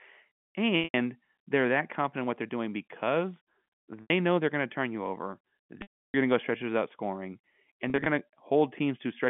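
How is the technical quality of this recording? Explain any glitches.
The recording has four brief dropouts from packet loss with pitch repetition, heard over narrowband telephone audio. The first is at 0.84 to 0.94 s (100 ms), just before "they're that confident what". The second is at 4.02 to 4.10 s (80 ms), before "know they're going to". The third and longest is at 5.82 to 6.14 s (320 ms). The last is at 7.90 to 8.06 s, after "stretches out scoring and". The losses fit 20 ms packets. The receiver repeats the last pitch period to fill each gap, so the short ones sound like a held, buzzy tone. The 320 ms gap fades to silence before the speech cross-fades back. The last event is a scatter of small losses, none longer than 40 ms.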